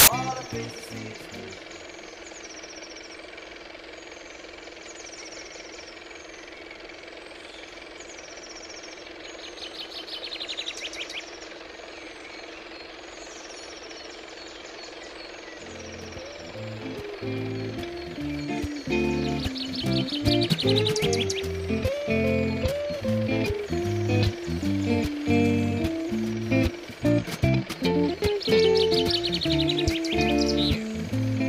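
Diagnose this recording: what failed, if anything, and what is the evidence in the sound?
The failure is at the storage and playback stage: file tags played as audio. The clip opens with a burst of very loud white noise from 0.00 to 0.075 s. Its edges are hard, and it stops dead before the program begins. The noise character points to an embedded cover picture. The player misread where the audio data starts and decoded the compressed image bytes as samples. Compressed data looks random, so it sounds like loud static.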